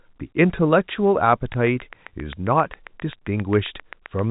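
A train of clicks runs from 1.54 s to 4.20 s: about twenty near-identical pulses at a steady 7.5 per second, each peaking roughly 5 dB above the speech, so they tick clearly through words and pauses alike. Such regular injection is likely interference from nearby equipment or a struggling interface. Beneath the clicks, the speech stays within the telephone band, with nothing above 4 kHz, which fits G.711 coding at an 8 kHz sample rate.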